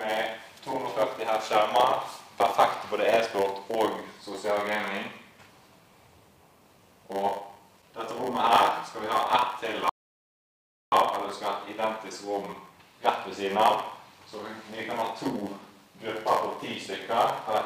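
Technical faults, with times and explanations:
Throughout, block size mismatch (padded): zero-filled gaps in every block cause a 100 Hz buzz and play about 8% slow with timbre unchanged, unlike resampling errors.
9.89 to 10.92 s, rebuffering stall: sound stops for about 1.03 s, then resumes exactly where it left off, adding time without skipping any audio, unlike a dropout.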